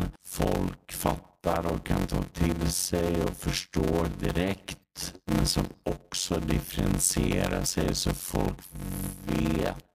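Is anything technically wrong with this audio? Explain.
Yes, there are two problems.

Throughout the clip, a block size mismatch (padded) means one stage writes shorter blocks than the next reads, so each block is topped up with zeros. That puts a gap in every block, heard as a buzz at about 91.9 Hz. The speech also runs at 0.533 times normal speed while keeping roughly its normal pitch, which fits 256-sample blocks being read as blocks of around 480.

At 4.80 to 4.84 s, between "till sig och förstår" and "men som också differentierar", and again at 7.62 to 7.66 s, between "men som också differentierar" and "så folk vet att", there is damaged data in a compressed stream. The decoder misreads corrupted frames, loses sync and hunts for the next frame header, producing a brief chirp or squawk.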